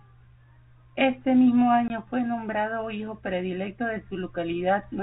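Speech over a G.711 A-law telephone channel, with nothing above 4 kHz, is broken by packet loss filled with silence from 1.88 to 1.90 s. The 20 ms hole fits a single lost packet. Its abrupt edges and total silence set it apart from concealed loss, which would smear or repeat the surrounding sound.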